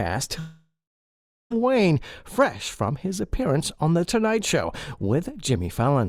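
From 0.39 to 1.52 s, the sound smears into a fading buzz, then about 0.76 s of silence; likely a long network dropout, longer than brief packet-loss glitches.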